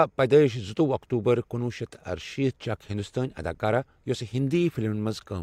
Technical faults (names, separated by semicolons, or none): none